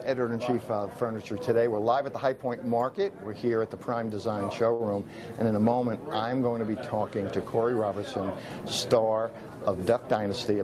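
At 4.73 s a short stall from a late packet holds the sound for about 60 ms until 4.81 s. The jitter buffer ran dry, so the receiver stretched the last sound and then resumed from the same point. Unlike a lost packet, nothing is skipped. The delay simply grows by 60 ms, heard as a brief held sound with a faint buzz or dip.

From 9.96 s to 10.61 s a jitter buffer speed-up plays the audio at about 109% speed. The receiver trimmed extra delay by cutting many pitch-period-sized slices, around 70 ms in all. Unlike resampling, which raises pitch along with speed, the pitch stays put and only the pace feels hurried.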